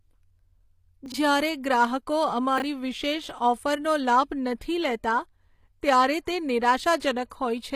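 The whole clip carries HE-AAC compression damage, and it is plainly audible. The treble sounds rebuilt rather than real. Nothing reaches above about 14.9 kHz. The upper band is likely spectral band replication: lower bands are copied upward and shaped by a coarse envelope. That fits a low bitrate near 24 kbps. Harmonics in the treble do not line up with those below the crossover.

From 1.06 to 1.14 s, chunks play out of order. One short piece of audio arrives late and plays after the pieces that should follow it. The span fits a 20 ms block landing three blocks late. Nothing is missing, but the sequence is wrong. There are three hard joins. The speech sounds jumbled for that moment.

At 1.85 s there is an electrical switching spike. It is heard as a sharp snap or a tight cluster of clicks laid on top of the speech. It does not replace the audio. It adds to it. The likely cause is a nearby switch, motor or static discharge arcing briefly. 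The audio line picked up that arc.

From 2.58 to 2.62 s, chunks are out of order again. This time the displacement is smaller. It fits a 20 ms block arriving one block late. Again nothing is lost. The order is wrong, and three hard joins break the flow. The result is a brief garbled moment. It is shorter than the first one.

At 7.30 s there is pre-echo. A sharp attack falls late in a codec block. The quantisation noise meant for the loud part spreads across the whole block. That noise fills the quiet gap before the attack. It extends about 12 ms ahead. A short hiss leads into the onset. The attack itself sounds smeared and soft.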